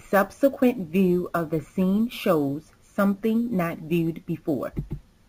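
From start to finish the speech carries imaging from sample-and-hold upsampling. The audio was raised from 16 kHz to 44.1 kHz by holding each sample with no smoothing filter, so mirrored copies of the spectrum sit above the original band, the first filling 8 to 16 kHz at about 25 dB below the signal. It sounds like a bright, metallic fizz tracking the speech's loudness. A spectrogram shows a reflected image of the speech harmonics above 8 kHz, pitch contours moving opposite to the real ones. The waveform shows small stair-step plateaus.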